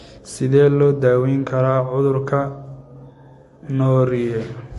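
All the way through, the speech is dull above 11.3 kHz and has a plainly audible watery smear, likely from MP3 compression at a low bitrate around 48 kbps.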